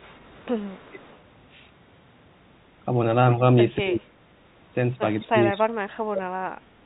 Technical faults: echo leak; speech suppressed in double talk

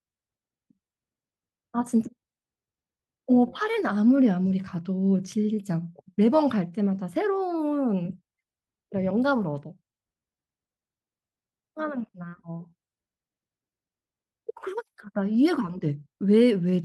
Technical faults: clock drift between sender and receiver; repeated timing corrections

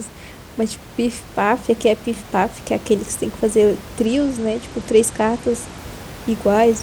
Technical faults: Bluetooth SBC bit pool drop

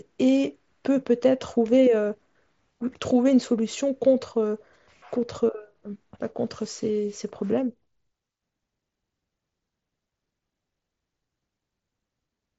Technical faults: none

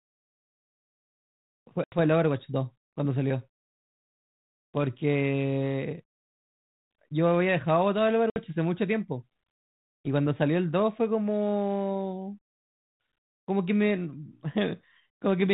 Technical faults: packet loss on an ADPCM call

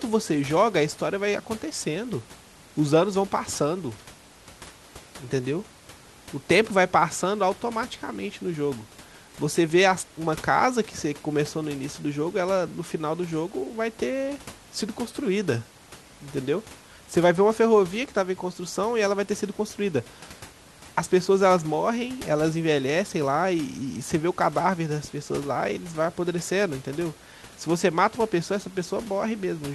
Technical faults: none

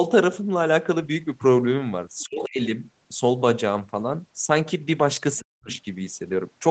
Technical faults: other side's voice leaking through; speech suppressed in double talk

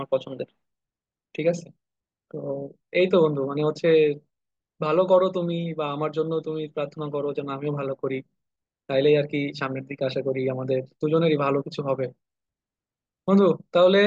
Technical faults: none

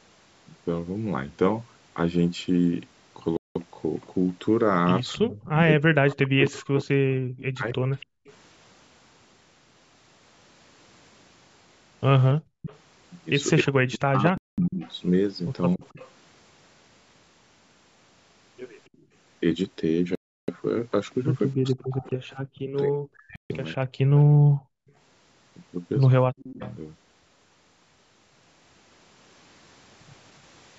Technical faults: Bluetooth stall; echo leak; speech suppressed in double talk; background gated by the echo canceller

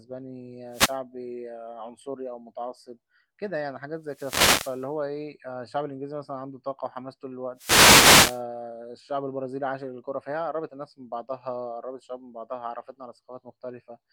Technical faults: wireless microphone noise hit

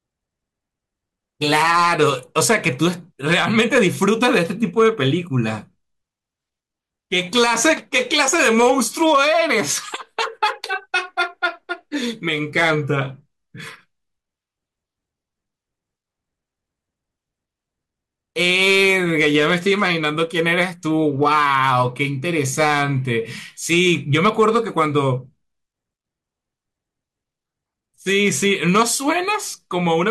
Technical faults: hard clipping

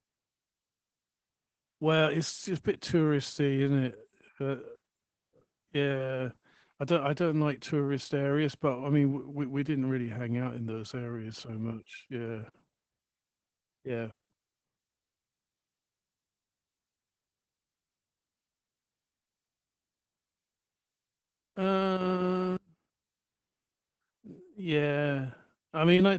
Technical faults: Opus voice compression

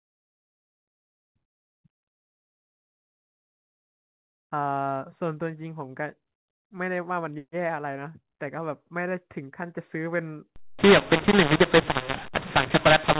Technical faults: mu-law and A-law mixed up

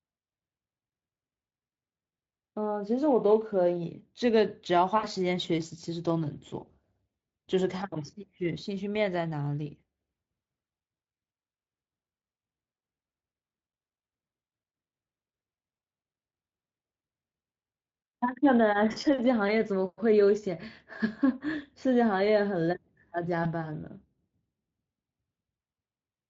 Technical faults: VoIP packet loss concealed by the speech codec

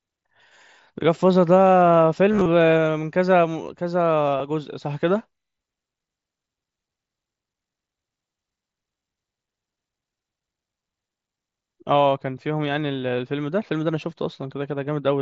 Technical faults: concealed Bluetooth headset packet loss

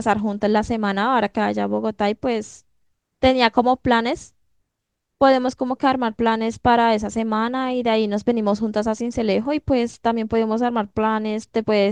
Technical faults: none

